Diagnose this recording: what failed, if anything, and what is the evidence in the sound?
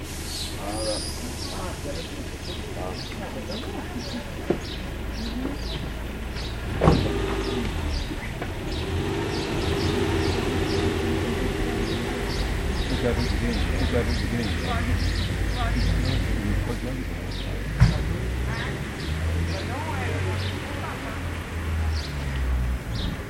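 A doubled audio track runs from 9.51 to 16.63 s: the full sound repeats about one second later at roughly equal level, starting and stopping abruptly. Unlike an echo or reverb it has no decay or room colouring, so a duplicated capture path or misaligned edit is the likely cause.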